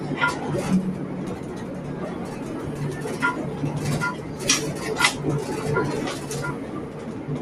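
From start to end the sound pumps and thins: sharp onsets mostly come through, but anything held or decaying sinks soon after, with the level dipping and recovering by around 5 dB. This is a noise suppressor applied to music or sounds. A processor built for speech treats sustained tones, room ambience and reverb tails as steady background noise and pulls them down, leaving only the attacks at full level.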